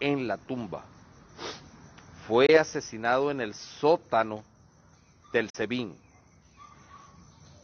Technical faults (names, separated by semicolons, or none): Bluetooth dropout